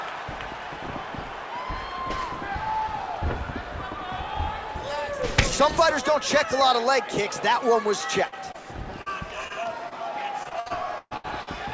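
From 8.28 s, short concealed packet loss hits at 8.28, 8.52, 9.02, 9.48, 9.64 and 9.89 s. Each drops 20 to 40 ms that the receiver patches by extending the preceding sound, heard as a brief smear or wobble.

From 10.43 to 11.49 s, repeated packet loss produces robotic sound. Eight gaps, the longest 128 ms, leave about a third of that stretch concealed, so the patches follow one another closely as choppy sound with pieces missing. Throughout, nothing sounds above 8 kHz, which fits a wideband call codec.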